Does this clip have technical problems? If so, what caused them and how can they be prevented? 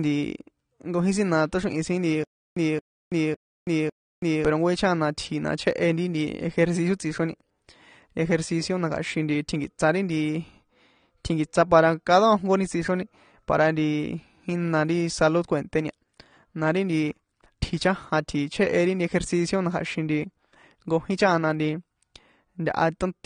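Yes. Throughout, the speech sounds dull and smeared, with a warbly, fizzy edge on sibilants and nothing above 9.7 kHz. This is likely AAC compression at a low bitrate, perhaps around 32 kbps, with the encoder cutting high frequencies and coarsely quantising the rest. Encoding at a higher bitrate, or keeping a lossless master, would prevent it.

From 2.24 to 4.45 s, the same 225 ms burst repeats four times, each followed by 328 ms of dead digital silence, giving a steady 553 ms cycle. This stutter with silent gaps likely comes from a stalled stream that replayed its last fragment at each retry, losing the audio in between. Larger playback buffers and a steadier network or disk would prevent it.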